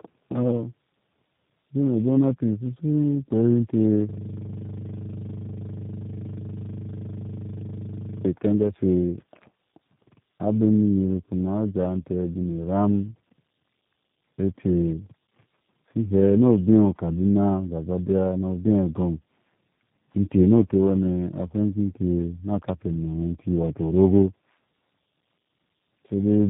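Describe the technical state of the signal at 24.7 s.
At 24.7 s the speech is still passing through tandem speech coding, which runs the whole clip: it was decoded and re-encoded at each link, three speech coders in a row, consistent with G.729A at both ends. Each pass compounds the last, leaving rough, muffled, warbly speech with nothing above 3.8 kHz.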